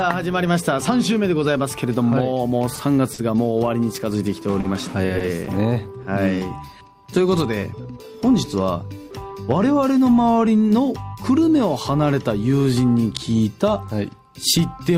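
Short stalls from late packets occur at 2.75–2.79 s, 3.13–3.20 s, 4.60–4.66 s and 5.18–5.22 s. Each time the jitter buffer ran empty, so the last sound was held for 20, 50, 40 and 20 ms before resuming. Spectrograms show frozen, horizontally smeared bands there.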